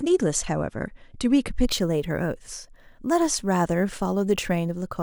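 From 1.66 s to the end, the speech picks up crude rate conversion: samples are simply repeated rather than filtered, which fits a 32 kHz to 48 kHz step. The resulting inharmonic, gritty fizz sits roughly 20 dB below the voice and tracks louder, brighter syllables.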